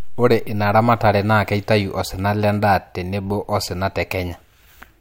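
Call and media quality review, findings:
No audible faults detected in the speech signal; level, continuity and bandwidth present as expected throughout the clip.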